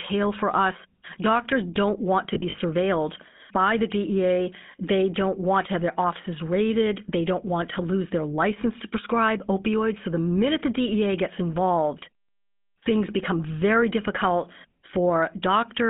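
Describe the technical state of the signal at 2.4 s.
At 2.4 s the signal sits inside a burst of lost GSM frames, from 2.34 to 2.59 s, just after "don't want to". About 100 ms of audio is missing across roughly 240 ms, consistent with five 20 ms frames, and no gap runs much past 40 ms. The concealment repeats the last good frame, giving short rough, metallic rings rather than silence.

Underneath, the GSM full-rate codec is plainly audible, with a buzzy, gravelly excitation consistent with 13 kbps coding, in a 150 Hz to 3.6 kHz band.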